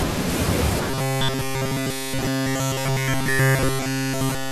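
Robotic sound from repeated short buffers, 0.90 to 4.51 s: speech becomes a rigid 133 Hz metallic buzz, likely from a repeating 7.5 ms buffer.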